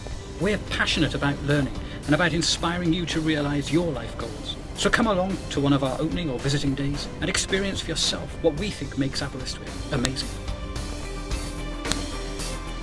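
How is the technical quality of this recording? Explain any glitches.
The recording has one recurring glitch: file header played as audio, at 10.05 s and again at 11.92 s. Separate WAV pieces were joined without stripping their headers, so the header bytes at the start of each new piece went through the player as if they were samples. Those bytes bear no relation to the surrounding waveform, so each event is heard as a sharp, loud click or snap lasting only a millisecond or so.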